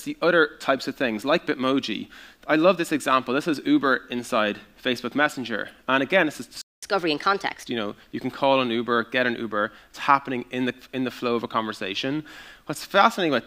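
At 6.62 s the sound just drops out and sits in silence for about 210 ms, until 6.83 s, then picks up again. That's a playback stall, most likely the player running dry on data or its thread getting blocked for a moment.

Right after, from 6.83 to 7.66 s, there's catch-up at higher speed. The player is burning through its backlog at 1.25x, so everything rushes and lifts by roughly four semitones before settling back to normal speed and pitch.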